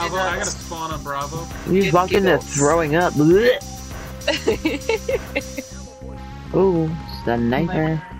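Around 2.14 to 2.16 s the audio has chunks out of order: one 10 ms chunk plays a chunk late, giving a brief jumbled flicker, seen as abrupt waveform discontinuities and thin vertical spectrogram lines.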